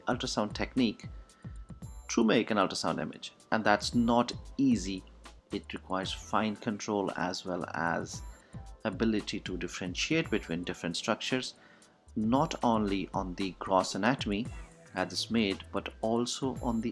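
No technical faults occur anywhere in the audio, so there is nothing to describe in time order.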